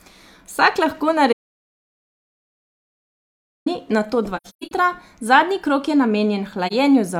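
It's a speech clip with two kinds of fault. From 1.33 to 3.66 s there's an audio dropout to silence: 2.3 s of silence with no room tone. That's likely the input dropping out, through a lost link or a mute, while recording carried on. Then there's AAC frame loss with muting, where the decoder zeroes missing frames and the window overlap fades the sound out and back in. From 4.36 to 4.72 s, 256 ms of holes are scattered across about 340 ms, which fits roughly six lost frames, with the longest run around 150 ms. A single frame's worth drops out again from 6.67 to 6.73 s.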